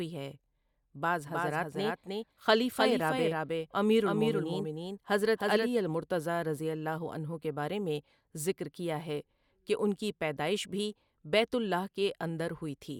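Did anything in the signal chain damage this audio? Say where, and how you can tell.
Yes: a doubled audio track, likely from a second, slower capture path. From 1.27 to 5.69 s, just before "المرتضیٰ رضی اللہ عنہ", a dry, somewhat quieter copy of the speech trails about 300 ms behind.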